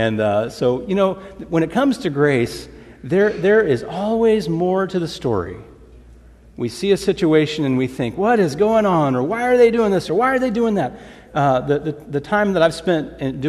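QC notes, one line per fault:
8.93–8.95 s, corrupt frame decoded: a sharp blip, peaking at about -10 dBFS. A few compressed frames arrived with damaged bits, and the decoder played them anyway. Misread gains and codes put energy at wrong frequencies, so the sound jumps briefly.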